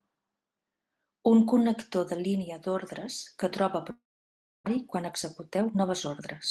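Speech over a call path whose coding noise and top end near 12 kHz point to Opus at a low bitrate. Right after "línia d'ordres que troba", from 3.91 to 4.68 s, the sound trails off into a fading buzz and then near-silence before resuming, with part of the speech gone. This is a long network dropout, likely packets arriving too late or not at all, so the receiver stretched out the last sound and then went quiet. From 4.77 to 6.22 s the speech runs hurried at unchanged pitch, about 14% fast. That is a jitter buffer speed-up: the buffer had built up roughly a fifth of a second of extra delay after the gap, and the receiver trimmed many short pitch-period slices to catch up.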